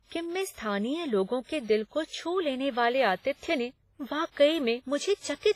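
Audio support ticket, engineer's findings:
WMA compression, throughout the speech. Ringing, washy texture; hiss rising and falling with the signal; heavy smearing around transients, pre-echo spread over tens of milliseconds. Nothing above 15.4 kHz. Likely cause: WMA transform encoder with long blocks, quantisation noise spread across each block, weak spectral lines zeroed. Damage level fits a low bitrate, around 24 kbps. Component: encode stage upstream of delivery. Re-source from an uncompressed or higher-bitrate master.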